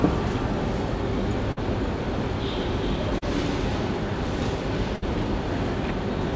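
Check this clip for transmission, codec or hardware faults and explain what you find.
There are three dropouts in the clip: two bursts of packet loss and one short concealed packet loss. Nothing is heard above 8 kHz, which fits a G.722 call path.

Burst of packet loss, 1.52–1.59 s and 4.96–5.04 s: the receiver stretches the last sound into a fading buzz or hiss, about 46 and 59 ms long, then resumes with roughly 40 and 60 ms missing.

Short concealed packet loss, 3.19–3.24 s: a brief gap is patched by continuing the preceding sound for about 34 ms, giving a quick smear before it blends back, with about 40 ms gone.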